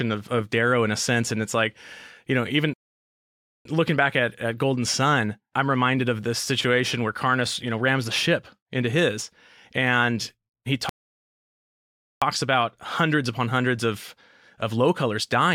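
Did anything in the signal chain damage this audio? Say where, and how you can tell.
Yes, at the playback stage: the player likely ran dry or was blocked, causing two playback stalls. The speech goes silent after "like you know even" from 2.74 to 3.65 s (0.92 s), and after "into his and he" from 10.89 to 12.22 s (1.32 s), before resuming.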